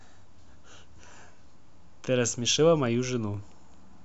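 At 3.34 s the speech briefly freezes: an underrun with held sample, where the output buffer ran dry and the converter held its last value for 0.73 ms, which fits a 32-sample gap. The waveform goes flat for that instant, just a tiny stall. About 0.7 ms of audio was lost meanwhile.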